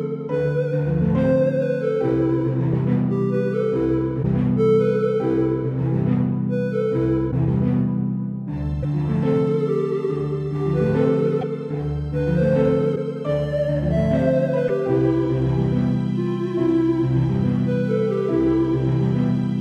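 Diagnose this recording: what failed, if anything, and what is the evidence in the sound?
The codec stage is the likely failure, specifically a broken MP3 bit reservoir. Six brief disruptions, each about 30 ms long, occur at 4.22, 7.30, 8.82, 11.40, 12.95 and 14.67 s. At each one the audio skips forward and a short chirp, noise burst or gap replaces it. The duration fits roughly one 26.1 ms frame. When frames are lost, the next frame reaches back for borrowed data and decodes bytes from another frame.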